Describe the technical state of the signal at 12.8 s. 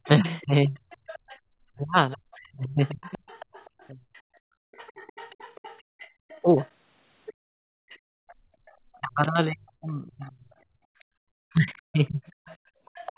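Background gated by the echo canceller, 12.78 to 12.91 s: the room sound dips by about 13 dB for roughly a tenth of a second while the canceller clamps the microphone, then returns.

Speech suppressed in double talk, from 9.0 s to the end: the talker's level drops deeply, likely because the echo canceller turned down the talker along with the loudspeaker echo during overlapping talk.

Other side's voice leaking through, from 0.04 s onward: a faint second voice, far below the main speech, likely residual loudspeaker echo the canceller failed to remove.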